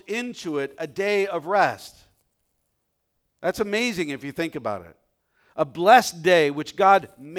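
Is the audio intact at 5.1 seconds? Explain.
Yes, the speech at 5.1 seconds is intact, with no dropout, click, distortion or other fault at that moment.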